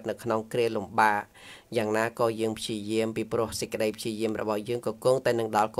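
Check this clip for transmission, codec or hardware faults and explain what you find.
Nothing in the clip points to a fault. There is nothing to report at any point in the audio.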